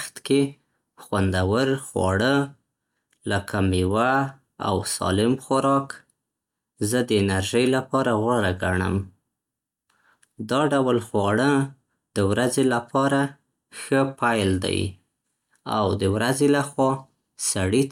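A recording of speech with no technical faults to report anywhere in the signal.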